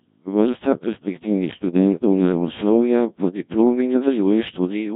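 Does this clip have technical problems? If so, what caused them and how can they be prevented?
Yes. Throughout the speech the Codec 2 vocoder is audible, with heavy damage that points to its 1.3 kbit/s mode. Only pitch, voicing, energy and a coarse spectral envelope survive, and the decoder rebuilds the voice from sine waves, giving a robotic, buzzy tone. Prevention: route speech through a higher-bitrate waveform codec.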